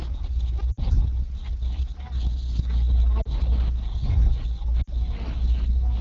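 Lost AMR speech frames at 0.72 to 0.80 s, 3.22 to 3.32 s and 4.82 to 4.90 s break up this speech recording, the first and last covering about 60 ms of missing audio and the middle one about 40 ms. At each gap, the decoder fills in by repeating the last good pitch and vocal tract shape at falling gain, so the sound fades to near silence within two frames before the signal recovers, weak or rough for a moment. The wideband coding underneath is clean, with only light codec colouring.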